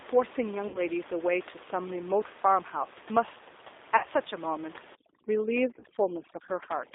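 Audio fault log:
throughout, G.729 codec: at 8 kbit/s the speech is rebuilt from a vocal tract filter, a pitch predictor and a few pulses per frame, so it sounds plainly rough and synthetic. On a spectrogram, energy sits only between 300 Hz and 3.7 kHz.
0.68–0.80 s, 3.97–4.08 s and 5.79–5.84 s, VoIP packet loss concealed by the speech codec: about 60, 60 and 30 ms of audio went missing. The decoder stretched its last pitch and filter into a sound that fades.
4.95–6.95 s, overdone noise removal: suppression set too hard against room noise about 18 dB below the speech mutes bands near its noise estimate. The background drops and breaks up into twinkling specks. The spectrogram shows dark gaps dotted with isolated specks.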